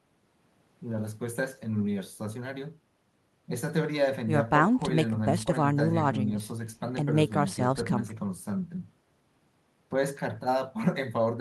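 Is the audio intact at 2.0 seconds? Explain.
Yes, at 2.0 seconds the speech plays through with no audible dropout, click, distortion or other fault.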